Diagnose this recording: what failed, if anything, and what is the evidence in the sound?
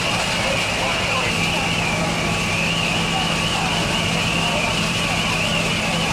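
The converter's clock is the culprit: sample clock jitter runs through the whole recording. There's a fine hiss that rises on loud, bright sounds and drops away in silence. Timing wobble of about 0.7 microseconds turns steep waveform slopes into noise sitting about 40 dB down.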